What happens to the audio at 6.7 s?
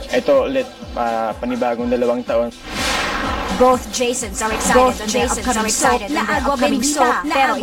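At 6.7 s a doubled audio track is playing, running from 4.51 s to the end: an equally loud full-band copy trails about a second behind, likely from a second capture path. Unlike echo, it has no decay and began abruptly.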